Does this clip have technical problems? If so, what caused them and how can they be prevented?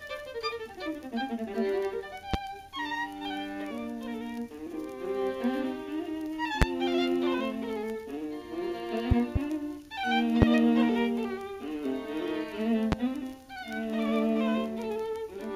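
Yes. Loud pops: a sudden voltage step or pulse, likely from a plug, a switch, static discharge or a driver glitch, entered the signal chain and was shaped into a sharp transient. Each sits about 20 to 25 dB above the sound, which continues underneath, at 2.34–2.37, 6.62–6.65, 10.42–10.45 and 12.92–12.95 s, with two pops in quick succession between 9.11 and 9.39 s. Secure all connections, avoid switching or replugging during recording, and ground equipment against static.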